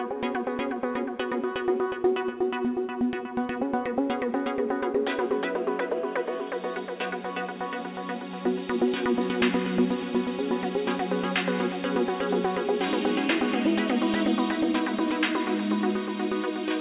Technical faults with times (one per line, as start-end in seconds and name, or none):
none